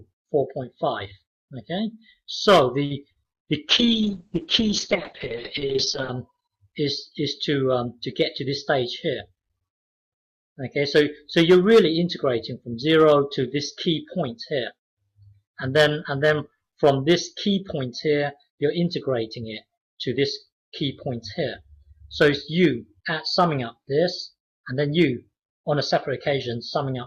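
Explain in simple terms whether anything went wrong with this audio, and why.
At 2.85 to 2.92 s there is a short stall from a late packet. A packet arrived late, so the last sound was held about 50 ms before playback resumed.

At 3.12 to 3.29 s, short concealed packet loss means about 40 ms of audio never arrived. The gap was patched by extending the previous sound, leaving a brief smear.

From 3.69 to 6.17 s, a call bitrate drop forced the encoder to use far fewer bits. The sound turns rough and muffled, losing everything above 8 kHz.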